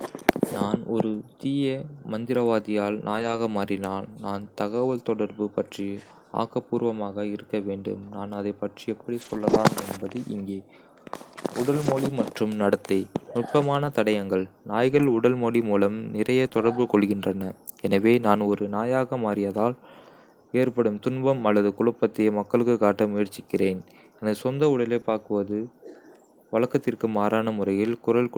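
Lost packets rebuilt from error correction occur at 3.11–3.37 s, 9.21–9.59 s, 11.81–11.87 s, 13.85 s, 14.87–15.13 s, 16.45–16.47 s, 16.53–16.83 s and 25.05–25.11 s. Packets went missing, but each following packet carried a low-bitrate backup copy that the decoder played in place of the original, so nothing drops out. Those stretches, from about 20 ms up to 200 ms of rebuilt audio, sound rougher and grainier than the surrounding speech.

Short concealed packet loss occurs at 16.49–16.53 s and 25.01–25.05 s. Each time, about 20 ms of audio never arrived and had no usable backup copy, so the receiver extended the preceding sound to bridge the gap before blending back into the received audio. Both heard as a brief smear or wobble, and each sits right next to one of the rebuilt stretches, which points to a burst of network loss.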